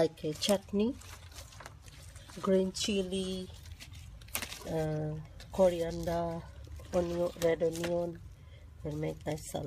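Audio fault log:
4.34 s pre-echo: a hiss of about 15 ms creeps in just ahead of a sharp attack, rising about 10 dB above the quiet before it, so the onset sounds blunted and smeared. The codec spreads its quantisation noise across a transform block of roughly 26 ms, and noise sized for the loud attack spills into the silence preceding it. That the smear reaches this far suggests the encoder never switched to short blocks.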